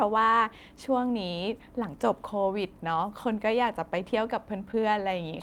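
At 4.71–4.83 s, short concealed packet loss: 20 ms never arrived, and the decoder continued the last sound, giving a brief smear, not a silent gap.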